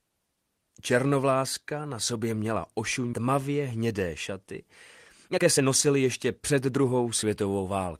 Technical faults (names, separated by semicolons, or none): skip ahead; jitter buffer speed-up